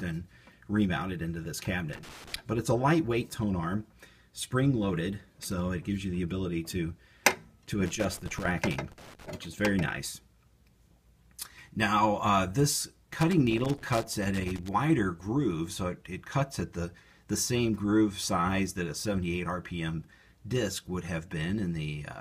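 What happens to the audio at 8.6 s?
An irregular burst of crackle and scratching runs through that moment, from 7.86 s to 9.30 s, about 1.4 seconds in all, with the sound chopped up. This is loose connector crackle: a worn or dirty contact somewhere in the signal path is making and breaking rapidly as it shifts, so the audio cuts in and out in quick, uneven fragments.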